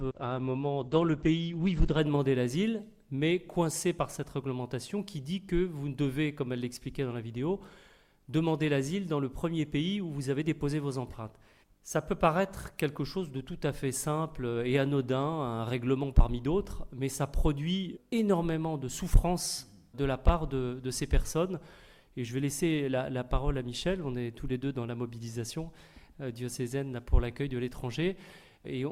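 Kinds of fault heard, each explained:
Adaptive stream starting at a low bitrate: from 0.0 to 2.0 s the player uses a low-bitrate version while it gauges the connection. Nothing sounds above 8.5 kHz and codec artefacts are stronger, fitting Opus near 12 kbit/s. Quality then jumps, gaplessly, to what suggests 64 kbit/s.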